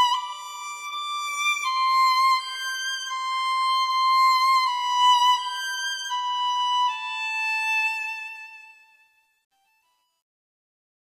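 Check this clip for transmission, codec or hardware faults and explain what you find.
One fault stands out: truncation distortion on the fade-out, from 7.81 s to the end at 11.2 s, worst from 8.74 s onward. As the fade that starts around 7.8 s lowers the level, the gain stage rounds the waveform to coarse steps with no dither, which fits about 10 bits being kept. The tail turns gritty. Unlike dropouts or gating, the grit grows as the level falls.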